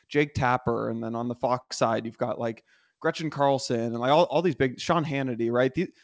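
Two short stalls from late packets show up, at 1.24 to 1.28 s and again at 1.62 to 1.71 s. Each time the jitter buffer ran dry, so the receiver held the last sound for 17 ms, then 77 ms, before resuming. Nothing drops out, but the second hold is longer.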